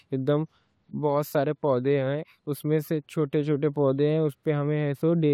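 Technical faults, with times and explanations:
No technical faults detected.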